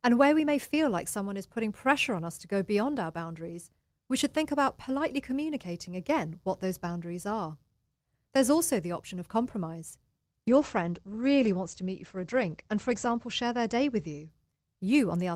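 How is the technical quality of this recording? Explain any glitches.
One fault, a call bitrate drop from 10.49 to 14.35 s, just after "the option of compromise". The bandwidth estimate fell, so the encoder coded coarsely and its top band shrank from 20 kHz to 8 kHz. The speech turns muffled and rough, consistent with roughly 13 kbps, steadily rather than in the brief gaps that packet loss would cause.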